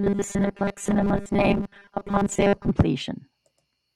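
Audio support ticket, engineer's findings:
Robotic sound from repeated short buffers, 0.01 s to 2.71 s. Speech becomes a rigid metallic buzz locked at 200 Hz that still roughly tracks the words. Likely cause: the playback or jitter buffer is starved and keeps replaying the last 5 ms block.

Distinguishing note: the buzz pitch stays fixed at 200 Hz regardless of the talker's intonation, and most of the audio is repeated rather than played fresh. Dropouts would leave gaps instead, and codec warble would not hold one steady pitch.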